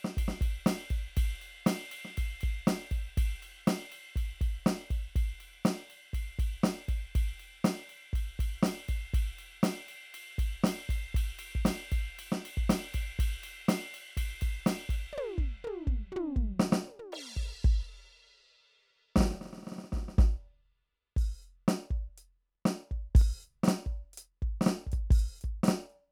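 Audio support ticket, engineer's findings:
Doubled audio track from 23.21 s to end. Music suddenly heard twice. Second copy trails about two seconds behind, somewhat quieter, full band, dry. Likely a slower capture path or edit layering offset copies. Abrupt onset, no decay.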